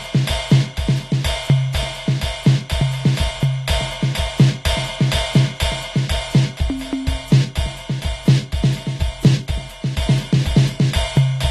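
From start to finish, the music sounds dull and smeared. Nothing is present above 12.4 kHz, so the top of the spectrum is cut away. Sustained tones warble, and bright sounds turn fizzy. The damage is plainly audible. The likely cause is AAC compression, in its AAC-LC form. At a low bitrate, around 32 kbps judging by the sound, the encoder drops the top band. It then starves the remaining bands of detail, leaving gaps and swirling texture.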